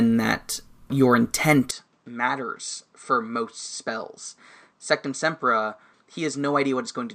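Input switched to a poorer device at 1.71 s, lasting to the end of this speech clip: with no gap at all, the sound abruptly turns duller and drops roughly 10 dB in level. Nothing above 8.6 kHz survives after the change, and a new, faint background noise sits far beneath the voice. The likely cause is the recording path moving from the original microphone to a narrower-band input, such as another microphone or a headset's call profile.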